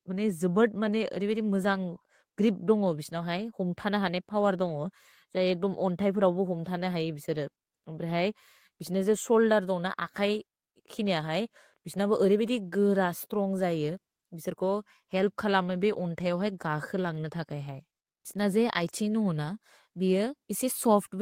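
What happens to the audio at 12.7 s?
Nothing goes wrong at 12.7 s; the speech runs on intact through that moment with no dropout, click or distortion.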